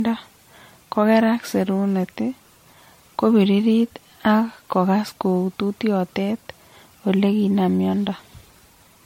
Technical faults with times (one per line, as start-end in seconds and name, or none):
0.00-9.05 generation loss